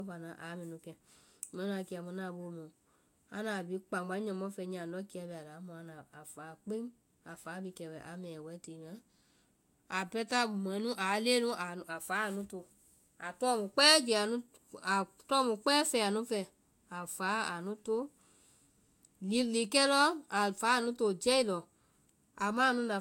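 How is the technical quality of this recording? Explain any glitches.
The speech carries one fault the whole way through: low-bitrate audio saved at a high bitrate. Nothing at all sits above 16.6 kHz, and that hard ceiling, plus the leftover artefacts of the first encoding, sounds like a lossy encode at a modest rate. The file itself reads as a generous MP3, so it was likely transcoded from a low-bitrate source. Re-encoding can't bring back what the first codec threw away, so the damage stays baked in.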